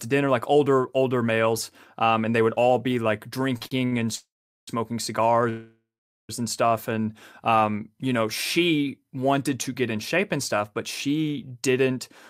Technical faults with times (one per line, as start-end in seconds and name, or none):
3.57-3.94 repeated stalls (stutter)
4.16-4.69 call audio freeze
5.49-6.31 call audio freeze